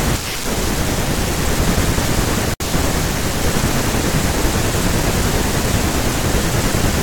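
At 2.54 s the speech drops into a gap at a join of encoded pieces, about 64 ms of silence ending at 2.60 s. Encoder delay and last-frame padding were left in when segments, cut every 4.0 s, were joined. It sounds like a brief, smeared dropout before the speech resumes.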